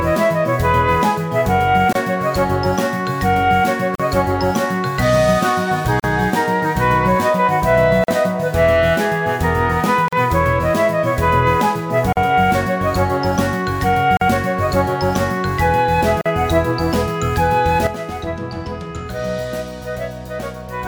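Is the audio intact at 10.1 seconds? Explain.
No. A gap at a join of encoded pieces opens from 10.08 to 10.13 s, a silence of about 43 ms. The audio was encoded in separate pieces and joined without trimming. Each piece kept its encoder's leading delay and its padded last frame, so silence sits at the seam. These joins fall every 2.0 s. The sound drops out abruptly, with smeared edges, then resumes where it stopped.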